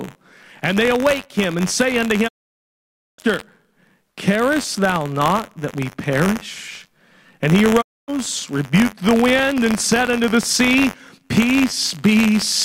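A steady buzz near 93.8 Hz runs under the audio wherever there is signal. This is buffer tearing: writer and reader of the playback ring buffer have slipped, so a small sliver of each period holds audio from about 40 ms earlier, joined with hard edges. The repeat rate fits a 512-sample buffer. Separately, the sound fades out over 20 ms and goes silent from 2.27 to 3.20 s and again from 7.80 to 8.10 s. These are digital broadcast dropouts, where the receiver muted while frames were missing or corrupt. Those gaps of roughly 0.9 s and 0.26 s are lost outright, not concealed.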